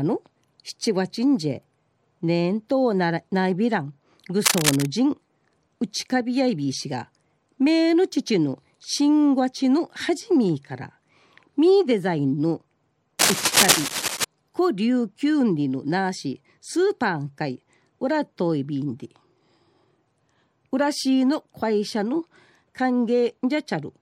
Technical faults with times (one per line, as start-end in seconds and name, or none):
4.44-4.86 cable scratch noise
13.18-14.24 cable scratch noise